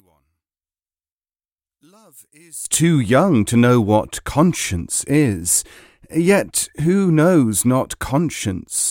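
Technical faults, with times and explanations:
0.00–2.65 s, one channel inverted: the speech drops about 23 dB to a faint residue rather than silence, likely reversed polarity cancelling the centred voice in mono.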